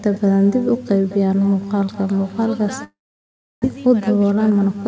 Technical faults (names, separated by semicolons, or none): echo with no canceller; long network dropout; jitter buffer speed-up